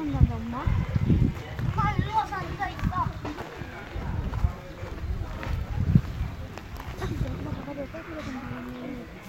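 Periodic clock jitter appears at 6.96 s and runs to the end of the clip. Interference is modulating the converter's sampling clock at around 100 Hz, so each sample is taken slightly early or late in a regular cycle. That timing wobble puts sidebands roughly 100 Hz above and below every component of the sound, strongest on the high-frequency content, which takes on a rough, metallic edge that disappears whenever the sound falls silent.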